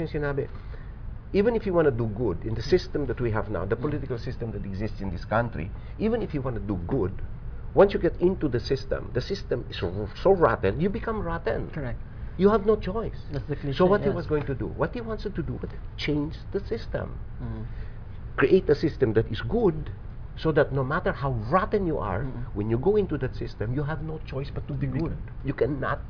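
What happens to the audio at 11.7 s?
Nothing goes wrong at 11.7 s; the audio plays through that moment intact, with no dropout, click, distortion or other fault.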